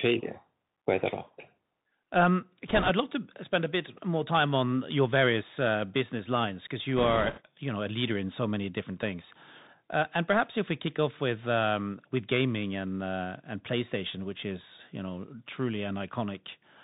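Bluetooth CVSD headset codec, throughout: the whole clip carries the narrowband sound of this codec, which fits a 64 kbit/s stream coding each sample as a single up-or-down step. Nothing above 4 kHz survives, so the speech sounds boxed in. Where the level climbs quickly the adaptive step cannot keep pace and the sound distorts, s sounds come out scratchy, and a fine granular hiss sits under everything.

Bit errors on a Bluetooth voice link, from 2.68 to 2.90 s, just before "love to spend a", and from 6.97 to 7.41 s, between "uh business lines because" and "you know a leader": flipped bits on the CVSD link, at a rate of a few percent, throw the step decoder off. Because each bit moves the output only a little and the error fades quickly, there are no sharp clicks. Instead a rushing, crackly noise washes over the speech for those stretches.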